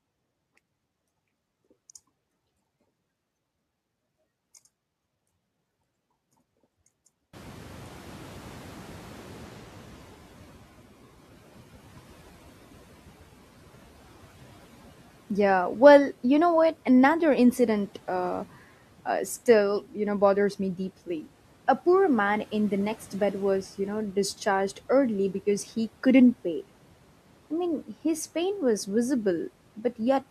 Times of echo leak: none

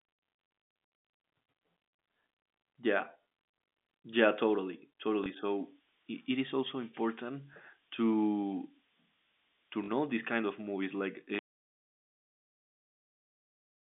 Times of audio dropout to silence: 11.39-13.91

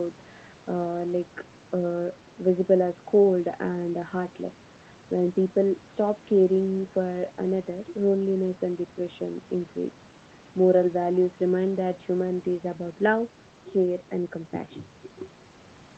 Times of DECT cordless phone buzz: none

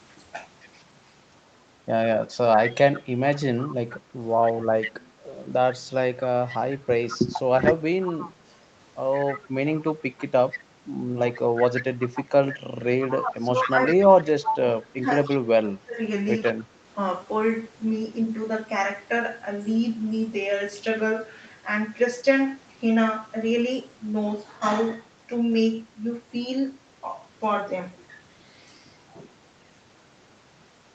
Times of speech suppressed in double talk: 13.10-15.99

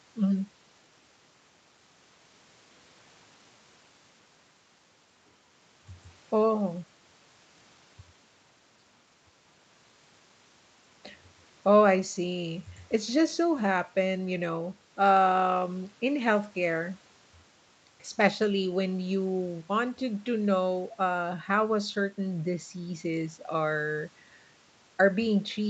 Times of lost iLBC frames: none

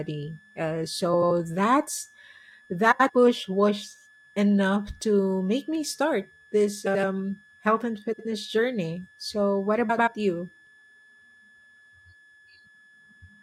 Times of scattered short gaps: none

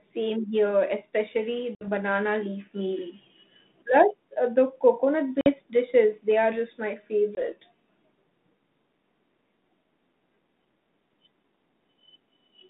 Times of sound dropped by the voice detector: none

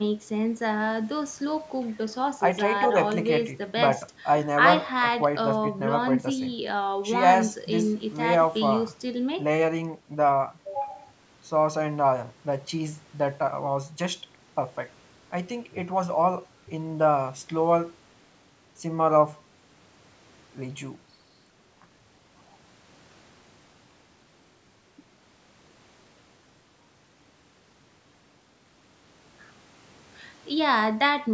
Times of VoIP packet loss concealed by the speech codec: none

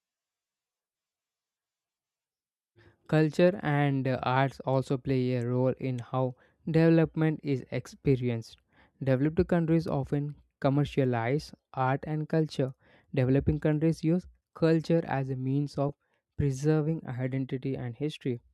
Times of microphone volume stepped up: none

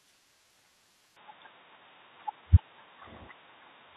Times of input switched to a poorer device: 1.16-3.97

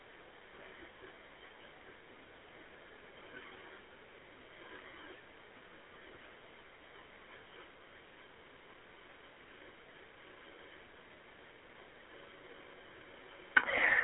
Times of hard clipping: none

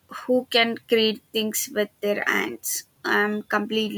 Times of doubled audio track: none

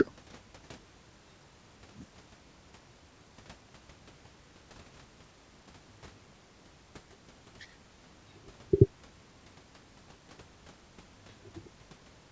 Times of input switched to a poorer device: none

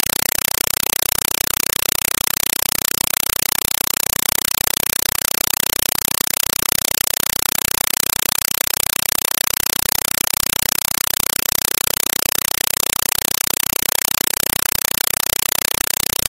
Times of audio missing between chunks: none

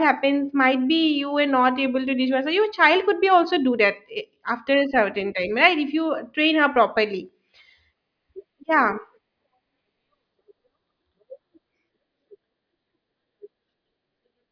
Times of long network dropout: none

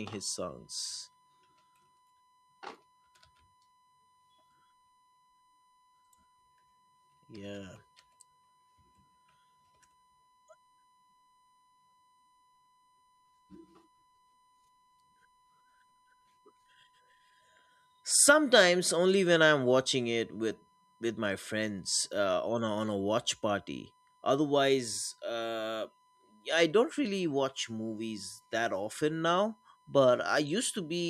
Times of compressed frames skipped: none

